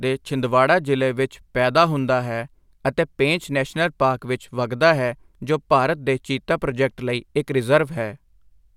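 Nothing in this speech recording stands out as a technical fault, so there's nothing here to flag.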